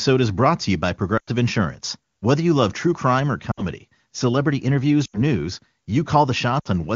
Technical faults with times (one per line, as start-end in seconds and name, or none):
1.17-1.31 lost AMR speech frames
3.52-3.64 lost AMR speech frames
5.05-5.20 lost AMR speech frames
6.59-6.68 lost AMR speech frames